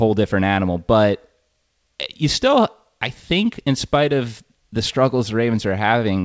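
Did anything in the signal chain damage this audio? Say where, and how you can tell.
No, nothing in the signal chain damaged this audio.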